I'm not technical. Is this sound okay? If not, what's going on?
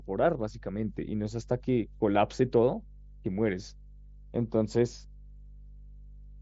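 No. A steady low buzz of mains hum at 50 Hz runs through the whole speech clip. It is fairly noticeable, and probably comes from electrical interference or a ground loop.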